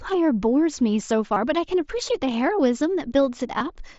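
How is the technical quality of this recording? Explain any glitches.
The recording has two brief dropouts from concealed Bluetooth headset packet loss, at 1.34–1.36 s and 3.58–3.61 s, heard through the light graininess of the mSBC headset codec. Each time, headset packets failed to arrive, and the phone filled the gap of roughly 22 ms, about three frames' worth, by repeating the closest-matching piece of the preceding waveform. The result is a short buzzy, steady-level hold with a slight warble as the real speech resumes.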